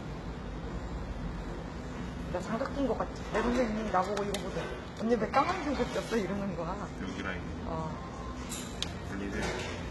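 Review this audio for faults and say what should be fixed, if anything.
HE-AAC compression damage runs through the whole clip. The treble sounds bright but grainy and metallic, and nothing reaches above 11.8 kHz. The likely cause is spectral band replication, which copies lower bands upward so harmonics no longer line up. The heavy damage fits a bitrate around 16 kbps. Encode at a higher bitrate or with a full-band codec to prevent it.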